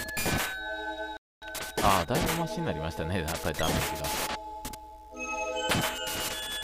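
At 1.17 s a playback stall, likely the player running short of data, cuts the sound to silence for about 250 ms before it resumes at 1.42 s.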